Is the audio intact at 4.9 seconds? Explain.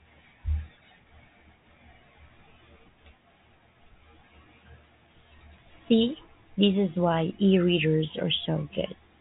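Yes, the speech at 4.9 seconds is intact, with no dropout, click or other fault at that moment.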